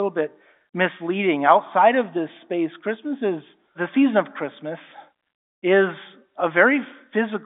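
Speech over a telephone line, with no faults heard.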